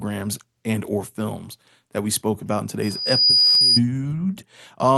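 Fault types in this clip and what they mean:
Loudspeaker feedback squeal: a microphone re-amplifying its own loudspeaker until one frequency runs away, heard here as a 4.9 kHz tone swelling over about half a second to roughly 5 dB above the speech after "we spoke about in".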